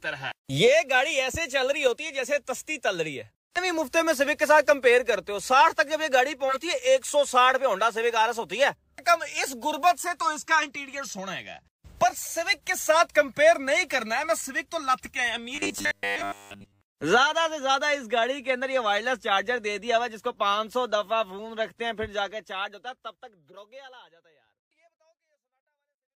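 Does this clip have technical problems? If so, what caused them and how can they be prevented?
Yes. Three brief chirps and blips of misplaced noise cut through the sound at 6.48 to 6.58 s, 14.34 to 14.38 s and 23.48 to 23.55 s, the last one arriving while the level is already easing down in the gentle fade-out that runs from around 22 s to the end. These are corrupt frames decoded: bits inside compressed frames were flipped, and the decoder played them anyway. Misread gains and codes scattered energy into the wrong frequencies for about three frames, then one, then two. Adding error detection to the stream, so damaged frames are concealed or dropped rather than decoded, prevents this.

From 15.55 to 16.81 s the sound turns into a rigid, metallic buzz pinned at 100 Hz that only loosely tracks what lies underneath. This is robotic sound from repeated short buffers, likely caused by new audio arriving too seldom. 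The playback software filled the gaps by looping the last short block, and the 100 Hz pitch fits a block of about 10 ms. Most of the real audio in that stretch was skipped and replaced by repeats. Larger jitter buffers, or better packet-loss concealment in place of plain looping, would prevent it.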